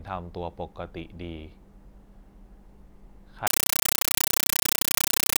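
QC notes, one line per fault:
3.47–5.39 s, compressed stream played as audio: the speech gives way to very loud, chattering static for the rest of the clip, because an undecoded Dolby Digital (AC-3) bitstream is being read as ordinary samples. Each frame comes out as an 8 ms burst of noise followed by zero padding, repeating at 31.25 Hz. That steady buzz-and-gap rhythm sets it apart from broadband noise or clipping, which lack regular silent gaps, and its frame timing fits a 384 kbps stream.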